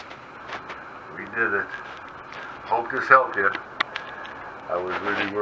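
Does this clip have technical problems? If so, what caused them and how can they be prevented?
No, nothing stood out as a technical problem on listening to this clip.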